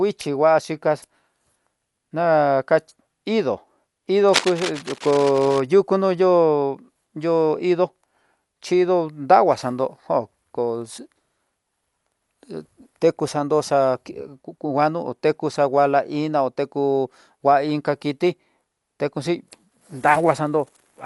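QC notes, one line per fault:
Throughout: Dolby Digital compression. The damage fits a likely AC-3 style encode at a low bitrate, around 64 kbps. To save bits, the encoder drops the top of the band entirely, so nothing remains above 11.5 kHz. Many of the remaining frequency lines get no mantissa bits and are rebuilt from dither noise on decoding. The speech therefore sounds dull and muffled, with a rough, fluttering haze around voiced tones that is plainly audible.
4.28–5.60 s: cable scratch noise, starting just after "na ka indó indó". The likely cause is a worn cable, connector or control being moved while its contact resistance jumps about rapidly. That injects dense, irregular bursts of noise into the signal, roughly 10 dB below the speech. For about 1.3 s a scratchy, rustling crackle rides over the voice and then stops.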